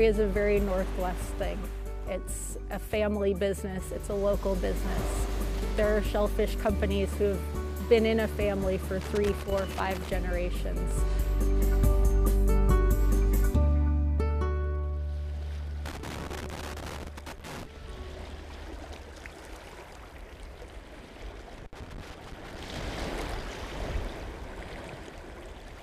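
A worn or dirty contact in the signal chain is intermittently making and breaking, producing loose connector crackle: the audio is chopped into irregular bursts of crackle and scratching at 9.01–10.11 s, 15.86–17.65 s and 21.58–22.83 s, each lasting roughly one to two seconds.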